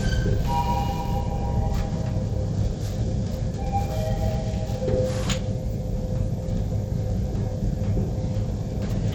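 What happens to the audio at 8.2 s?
At 8.2 s the audio is still carrying the damage that runs through the whole clip, most likely from Bluetooth SBC compression. The encoder splits the signal into a few wide frequency bands and, with a tight bit budget, starves the upper bands and quantises the rest coarsely, which fits a rate around 96 kbps. The treble thins out and flickers, and a gritty, aliased roughness sits on the sound.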